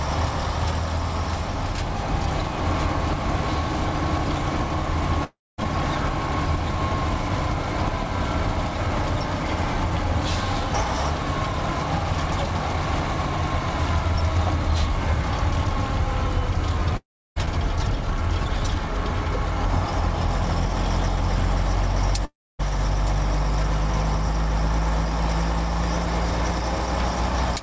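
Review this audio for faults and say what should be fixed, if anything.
Packets likely stopped arriving in a long network dropout at 5.24–5.60 s, 16.97–17.38 s and 22.25–22.61 s. Each time the receiver stretched the last sound into a fading buzz before 0.22–0.32 s of silence, and 0.34–0.40 s of audio was lost. To prevent it, stabilise the network link and give the jitter buffer enough headroom, or add redundancy or forward error correction, so that short outages are bridged rather than dropped.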